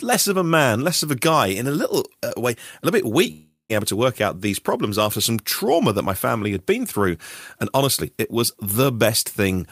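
From 3.31 to 3.81 s the speech breaks off in a long network dropout. For roughly 380 ms the receiver likely filled the gap by extending the last sound as a fading buzz, then about 150 ms of silence follows before audio resumes, with the missing stretch simply gone.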